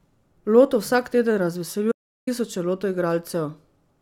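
A speech clip with an audio dropout to silence from 1.92 to 2.27 s, right after "vsak teden", where about 0.35 s of the recording is simply missing. The gap is silent, with the room tone vanishing along with the speech, and the sound cuts off and resumes abruptly rather than fading. That sets it apart from a noise gate closing or a natural pause, both of which leave some floor or taper. The likely cause is a brief loss of input, such as a link failure or momentary mute, while recording continued.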